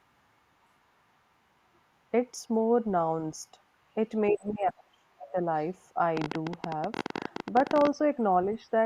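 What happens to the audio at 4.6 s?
Speech suppressed in double talk runs from 4.31 to 5.37 s. The talker's speech sinks sharply, by about 35 dB at its deepest, and stays down for roughly a second. The likely cause is an echo canceller that, with both sides talking, couldn't tell this talker from loudspeaker echo and turned everything down.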